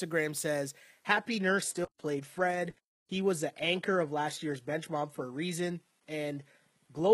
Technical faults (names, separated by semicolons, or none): adaptive stream at a lower bitrate